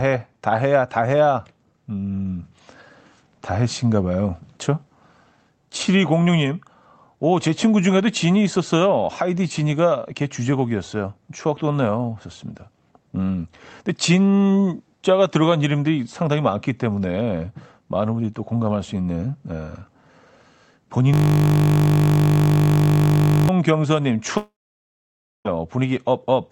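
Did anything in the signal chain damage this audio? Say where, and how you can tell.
Yes. From 21.14 to 23.49 s there is a system hang loop at the driver or buffer stage. One 20 ms slice of audio repeats over a hundred times, making a steady 50 Hz buzz. The waveform shows identical 20 ms cycles, and a spectrogram shows a comb of harmonics at multiples of 50 Hz. This fits the ring buffer being replayed while the system was frozen.

From 24.37 to 25.48 s, about 1.08 s of audio is missing. The last sound is stretched into a fading buzz, then roughly 0.94 s of near-silence follows, and the audio resumes further on. On a spectrogram this is a smeared tail, then an empty band. The likely cause is a long network dropout in the call path.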